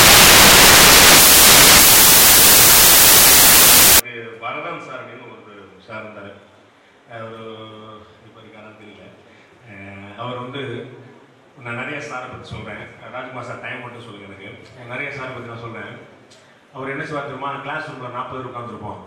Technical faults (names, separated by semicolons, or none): samples built from the wrong bytes